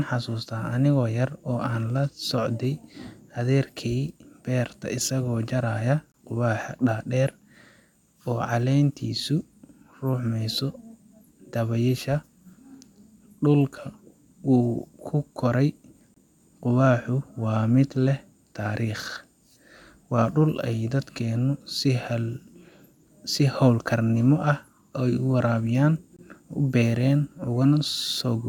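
Three short holes interrupt the speech at 6.12–6.14 s, between "adeerkey beerta isago jarayo" and "quwaxa dadeer", then at 16.14–16.16 s and 26.16–26.19 s. These are gaps between chunks: 23 ms of silence is inserted at each join of 10 s chunks, without loss of sound.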